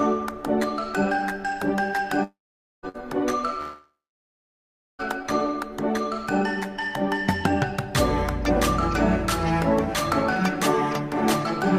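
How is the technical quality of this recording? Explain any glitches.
The recording has three transmission faults packed into its first five seconds: two long dropouts and a short burst of packet loss between them.

From 2.23 to 2.86 s, and again from 3.61 to 5.02 s, there is a long network dropout. In the first, about 600 ms of audio never arrives. The receiver extends the last sound briefly as a fading buzz or hiss, and the final 490 ms or so is dead silence. The second loses about 1.38 s, with roughly 1.06 s of that heard as silence. The cause is likely a stalled connection rather than a problem in recording. What marks these as dropouts rather than packet loss is that the concealment gives out and the audio goes truly quiet before resuming further on.

From 2.89 to 3.03 s, just after the first dropout, there is a burst of packet loss. Only about 60 ms is missing. The receiver fills the gap by holding and fading the last sound, so you hear a short smeared buzz or hiss instead of a hole. 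That fill runs about 54 ms, a little shorter than the missing audio, and about 12 ms is added. It is too brief to fall to silence, which is what separates it from the dropouts.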